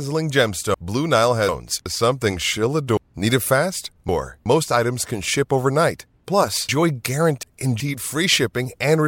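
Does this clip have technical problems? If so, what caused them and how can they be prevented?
Yes: chunks out of order at 0.74–1.86 s (just before "something she'll"), 2.97–4.46 s (just after "something she'll") and 6.69–7.80 s. In each, a 0.37 s block plays two, three and two blocks late, respectively, jumbling the speech. Buffering and reordering blocks by sequence number before playback or writing prevents this.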